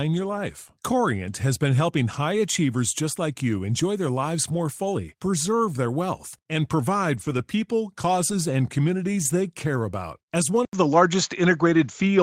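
At 4.43 to 4.57 s, just after "like you enjoy their" and before "fully preserve their wealth", a lost packet rebuilt from error correction is audible. There is no gap, but the recovered stretch turns rough and noisy, and the top end thins because the low-bitrate backup copy lacks it. The same happens at 7.13 to 7.39 s, after "preserve their wealth and", and briefly at 8.31 to 8.33 s, before "and communities they care".

From 10.65 s to the end, the sound changes character abruptly. An 80 ms silence marks the change, and afterward the audio is duller and boxier, with nothing above 7.2 kHz. The level shifts by a few dB, and a faint new noise floor sits well below the signal. This is likely an input switched to a poorer device, such as a different microphone or a headset's narrower call profile.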